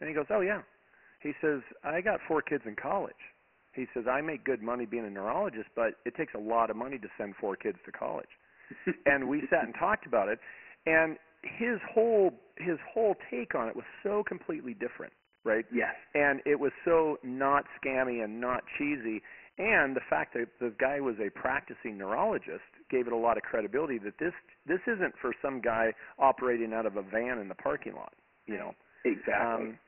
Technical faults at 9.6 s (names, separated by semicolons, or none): Dialogic VOX ADPCM